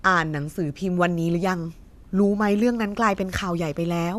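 No technical faults turn up anywhere in this one; it's just the recording running its course with nothing that calls for comment.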